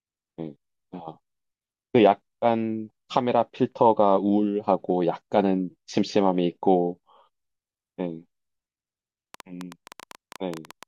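A speech clip with a train of clicks from 9.34 to 10.84 s: about fifteen similar pops, roughly 11 per second at uneven spacing, peaking some 5 dB above the speech. Their matching shape sets them apart from random crackle; likely interference or a faulty connection.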